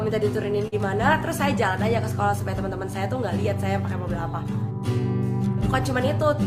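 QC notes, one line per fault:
0.67–0.89 s, burst of packet loss: about 46 ms is concealed by extending and fading the last sound, and about 40 ms is missing before the audio resumes. The waveform shows a decaying repeated segment, and the spectrogram shows the held sound fading and breaking off at the resumption.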